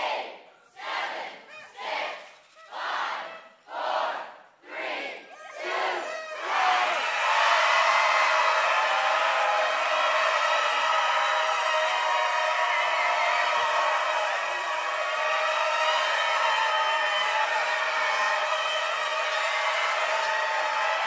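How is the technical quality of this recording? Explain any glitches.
No glitches detected; the recording shows no audible technical faults.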